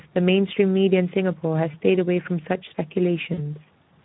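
The whole speech clip carries Speex codec damage. The voice sounds noisy and hoarse. This fits a low Speex setting near 11 kbps. Too few bits describe the excitation, so the CELP model smears fine detail.

At 1.71 to 1.76 s comes VoIP packet loss concealed by the speech codec. About 20 ms of audio is missing. The decoder repeats its last pitch and filter, stretching the sound with a gain that fades. The voice stays weak until 1.76 s.

At 3.33 to 3.43 s the same concealment returns, now covering about 40 ms of lost audio. The extrapolated sound lasts longer and decays further. The voice sounds weak and distorted until 3.43 s, as each frame builds on the last.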